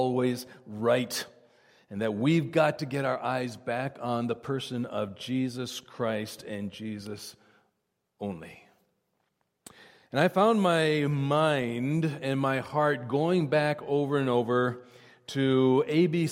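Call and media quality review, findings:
No audible faults found in the signal path: no dropouts, level disturbances or transport artefacts were detected at any point in the audio.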